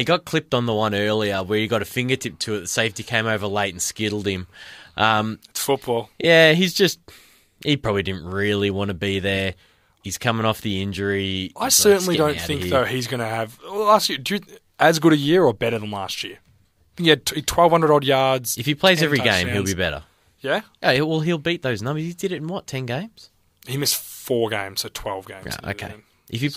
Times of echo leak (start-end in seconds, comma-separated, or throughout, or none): none